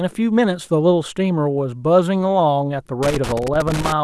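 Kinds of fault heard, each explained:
Loose connector crackle: a worn or dirty contact keeps making and breaking, chopping the speech into an irregular scratchy crackle from about 3.03 s to the end.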